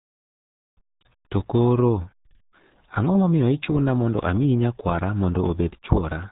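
From start to finish the speech has been squeezed through the RealAudio 14.4 codec at a rate consistent with roughly 8 kbit/s, and the damage is heavy: nothing survives above 3.9 kHz, leaving the speech muffled and gargly.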